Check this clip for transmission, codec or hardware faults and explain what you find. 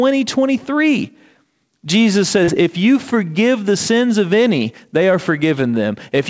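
One transmission fault is audible in this speech, a short concealed packet loss. It sits inside the call-codec sound, which carries nothing above 8 kHz, consistent with G.722.

From 2.44 to 2.50 s, about 40 ms of audio arrived too late. The receiver bridged the gap by extending the preceding sound, then blended back into the real signal. The result is a brief smeared wobble where a short sound can vanish.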